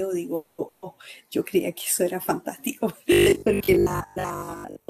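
A call audio freeze runs from 0.35 to 0.60 s. The speech stalls and the last sound is drawn out as a fading buzz or hiss for about 230 ms, likely because packets were held up and the jitter buffer ran dry. When it resumes, nothing is lost, but everything after arrives about 230 ms later.

A burst of packet loss follows at 0.68 to 0.84 s. About 140 ms of speech never arrived in time, so the receiver stretches the previous sound into a dwindling buzz or hiss and then jumps ahead, leaving that stretch of speech missing.

Robotic sound from repeated short buffers starts at 3.12 s and lasts to the end. The speech becomes a rigid, metallic drone carrying a 50 Hz buzz, which fits a repeated 20 ms chunk. Most of the real audio is being skipped, likely because new audio arrives too seldom to keep up.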